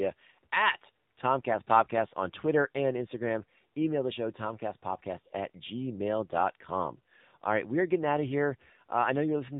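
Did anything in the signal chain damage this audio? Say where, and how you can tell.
Yes, at the codec. Throughout, the speech is buzzy and synthetic with nothing above 4 kHz, the mark of the AMR narrowband mobile codec, likely a low mode near 7.4 kbps.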